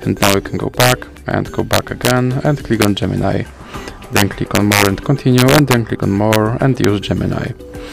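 Violent, sharp cracks break out on the loudest peaks at 0.23–0.34, 0.80–0.92, 1.73–2.11, 2.82–2.85, 4.17–4.87, 5.38–5.74, 6.33–6.36 and 6.84 s. This is integer overflow: peaks driven up to about 4 dB past the integer limit wrap to the opposite sign instead of being held at full scale.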